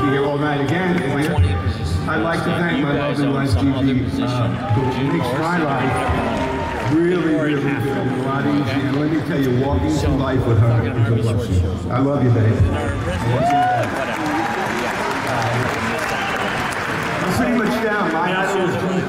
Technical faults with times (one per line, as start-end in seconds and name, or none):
none